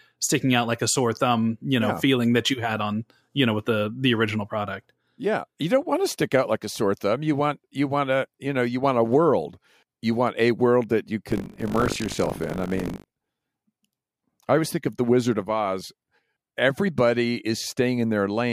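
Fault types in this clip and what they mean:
buffer tearing: the program filling the ring buffer and the hardware reading it have slipped out of step, so their positions cross inside every period. Around a sixth of each buffer holds audio from roughly 70 ms earlier, with a hard join on both sides. From 11.28 to 13.31 s the speech carries a steady robotic 50 Hz buzz, a pair of joins every 20 ms. On a waveform this shows as abrupt steps repeating every 20 ms, and on a spectrogram as evenly spaced vertical lines with a comb of 50 Hz harmonics.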